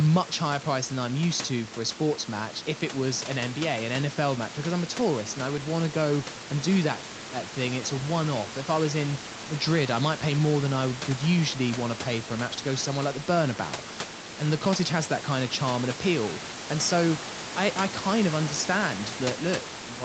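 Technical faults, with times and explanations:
No technical faults can be heard in this speech. Nothing reaches above 8 kHz, as fits the call codec path, and the room noise sits about 14 dB below the speech.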